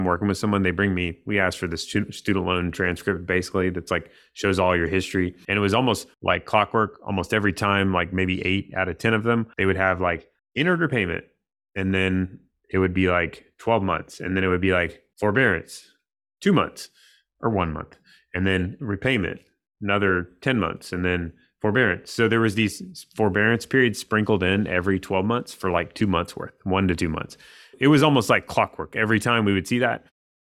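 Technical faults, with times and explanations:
No technical faults are present in this speech clip, so there are no times or explanations to give.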